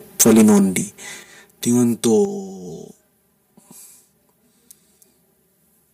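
From the start and throughout, the speech sounds hollow and phasey. This is channel delay (comb filtering). One channel arrives roughly 5 ms late, and the mono sum cancels at evenly spaced frequencies. The first notch sits near 100 Hz.

From 0.19 to 0.77 s the loudest syllables turn harsh and crackly, with flattened tops. This is likely microphone overload. The input was too hot. Peaks overshoot the converter's limit by about 14 dB, and around a tenth of the samples are clipped.

The level then drops suddenly at 0.22, 1.23 and 2.25 s, by about 4, 7 and 6 dB. Voice and background fall together. This is the microphone volume stepped down, likely by call software reacting to the clipped input and cutting the device's gain.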